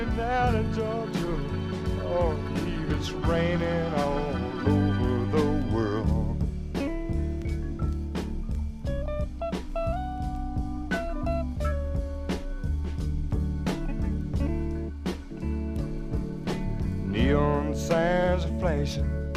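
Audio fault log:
No fault is heard anywhere in the audio.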